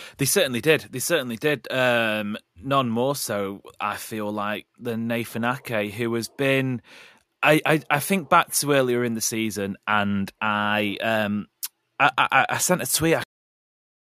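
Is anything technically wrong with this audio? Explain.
Yes. The speech has a cut-off end. At 13.24 s the audio stops abruptly in the middle of a sound. It falls straight to digital silence, which lasts to the end of the clip at 14.18 s. There is no natural decay or fade. The final stretch of audio was never written out or played, so the signal ends wherever the last saved buffer happened to finish.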